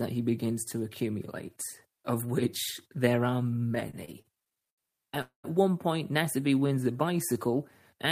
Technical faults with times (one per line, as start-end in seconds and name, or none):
3.75-5.18 repeated stalls (stutter)
5.22-5.46 call audio freeze
6.42-7.52 jitter buffer slow-down